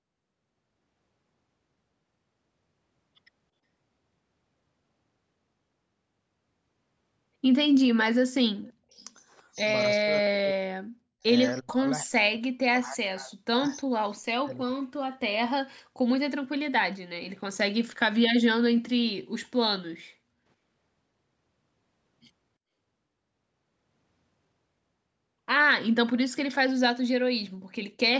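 At 8.63 s and again at 9.00 s, a faint echo leak appears: a copy of the speech delayed by 332 ms and sitting about 35 to 40 dB below it, likely loudspeaker pickup the echo canceller left uncancelled. From 8.78 s, speech is suppressed in double talk. It dips by up to roughly 40 dB, or partly cuts out, at 8.78 s, 9.98 to 11.23 s, 11.6 to 11.86 s, 12.06 to 14.0 s and, less deeply, 14.39 to 14.84 s, likely because the canceller turned the talker down along with the echo.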